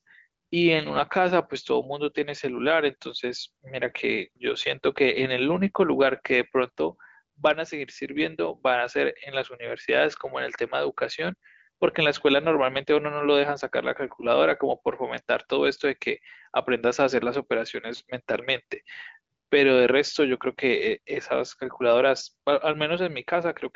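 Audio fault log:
No faults found; the speech is band-limited to about 7.7 kHz, consistent with the AMR wideband (HD Voice) codec at one of its higher rates, around 18 kbit/s, where coding damage is faint at most.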